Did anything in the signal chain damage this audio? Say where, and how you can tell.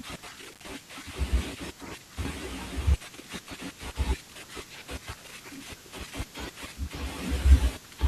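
Yes: the speech drops out from 0.52 to 0.61 s, with crackle at each edge. That is an intermittent contact in the analogue wiring, a loose connection opening for about 71 ms.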